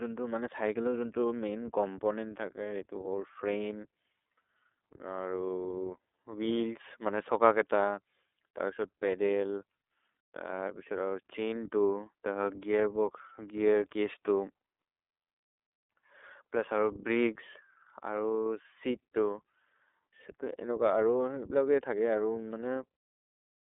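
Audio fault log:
Throughout, iLBC codec: the speech is confined to a telephone band of about 300 Hz to 3.6 kHz, with nothing above 3.8 kHz, so it sounds thin and dull. Each 30 ms frame's excitation is coded on its own, without reference to the frame before, which fits the 13.33 kbps mode. That independent, coarse coding leaves the voice plainly rough and slightly synthetic.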